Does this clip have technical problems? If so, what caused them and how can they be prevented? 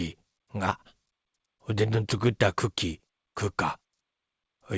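No technical faults.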